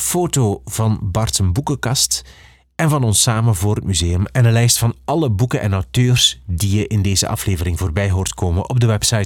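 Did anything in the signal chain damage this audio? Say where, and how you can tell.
No, nothing along the chain, from capture through conversion and transport to playback, left any audible damage on this speech.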